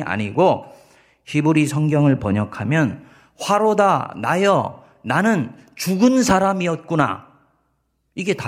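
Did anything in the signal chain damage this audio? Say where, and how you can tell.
No, no stage of the signal chain has left any audible damage on this speech recording.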